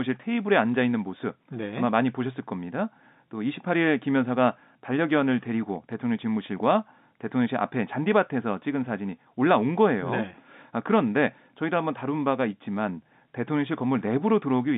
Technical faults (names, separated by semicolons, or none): none